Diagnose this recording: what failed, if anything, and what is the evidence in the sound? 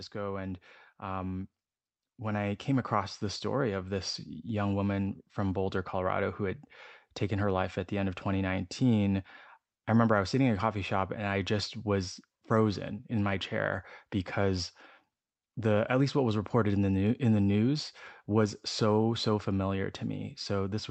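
The fault is automatic gain rising, in the call processing stage. From 0.12 s to 4.18 s the whole signal swells steadily, just before "young woman from". The speech and the background noise climb together. The total rise is about 9 dB. That shared, gradual climb gives it away. The gain control judged the input too quiet. It then raised its gain slowly over about four seconds. A louder talker would not lift the room noise too.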